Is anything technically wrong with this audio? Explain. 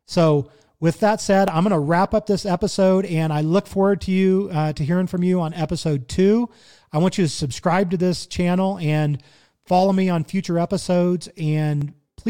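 Yes. From about 1.48 s, just after "with that said", to 11.82 s, there is a regular click roughly every 2.58 s, about five in all. These are most likely clock drift buffer slips. Two devices running on separate clocks that disagree by a few hundred parts per million make the buffer between them drift until a small block of samples, on the order of tens, is dropped or repeated. Each slip breaks the waveform, so a short click lands on the speech at this steady interval.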